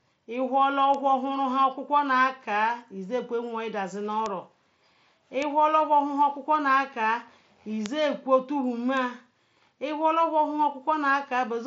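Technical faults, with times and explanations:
0.94 s, 4.26 s, 5.42 s, 7.86 s and 8.97 s, bit error spike: a single flipped bit in a stored or transmitted sample value, spanning one sample at the first three and two adjacent samples at the last two, makes the waveform jump by a power of two and snap straight back. Each is a sharp, broadband tick unrelated to the speech.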